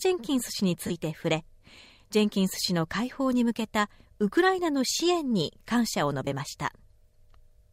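Bluetooth LE Audio frames were lost twice: from 0.87 to 0.91 s, a 30 ms gap consistent with three 10 ms frames, and from 6.25 to 6.27 s, a 20 ms gap that fits two frames. In each gap the LC3 decoder fills in by repeating the last received spectrum with randomised signs. That turns the sound into a short, noisy smear rather than a clean dropout.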